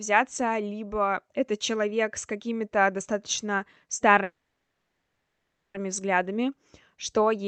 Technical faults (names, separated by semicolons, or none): call audio freeze